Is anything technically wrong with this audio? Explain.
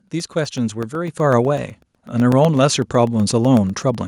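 Yes. From 0.08 s to 3.95 s the recording shows periodic USB or driver dropouts. Something on the system stalls the USB transfer or the audio driver at a fixed 0.125 s interval, and each stall leaves a gap of roughly a millisecond that is filled with silence. Around thirty of these gaps, eight per second, come through as an even train of ticks riding on the speech, heard only while there is signal to interrupt.

At 1.08 s the microphone volume is stepped up. The call software judged the input too quiet and raised the device's gain in a single jump of about 5 dB. Because the change happens at the microphone rather than in later processing, the speech and the background noise get louder together, so from that moment the whole sound is abruptly and uniformly louder.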